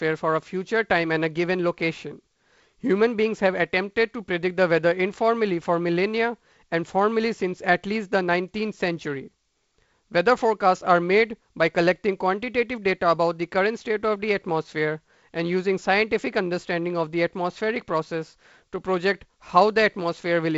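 No faults: the speech runs through G.722 wideband telephone coding as designed, with nothing above 7.7 kHz and the light hiss and slightly noisier low band that point to the 48 kbit/s mode.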